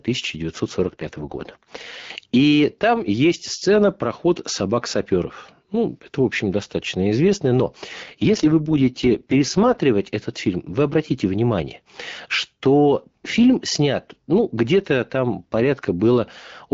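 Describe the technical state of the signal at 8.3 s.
At 8.3 s the speech is inside an AMR rate drop running from 8.03 to 9.80 s. The codec steps down, which points to a fall from about 12.65 to 6.6 kbit/s. The band stays intact, with no gap. The voice turns rough and raspy until the rate recovers.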